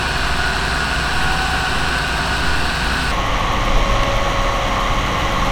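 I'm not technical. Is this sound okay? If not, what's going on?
No. From the start to about 3.1 s there is a section at the wrong speed: it plays roughly 1.36 times too fast, so the sound is hurried and raised about five semitones. It then drops to normal pace, likely from a mismatched playback clock.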